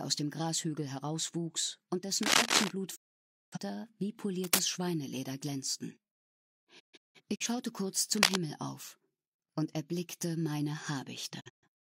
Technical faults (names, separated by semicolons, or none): cable scratch noise; digital broadcast dropout